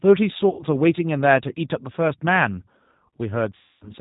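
The whole recording has passed through a low-rate speech coder, consistent with the G.729 codec at 8 kbit/s: the voice is rebuilt from a filter, a pitch predictor and a few pulses per frame, so nothing above 4 kHz survives and the speech sounds plainly rough and synthetic.

From 0.49 to 0.65 s, about 100 ms of audio went missing, which fits five lost packets. This is VoIP packet loss concealed by the speech codec: the decoder extended its last pitch and filter with falling gain, giving a drawn-out, fading stretch. At 3.57 to 3.92 s a longer gap of about 240 ms, roughly twelve packets, is stretched out and fades, and the voice stays weak or distorted after packets resume.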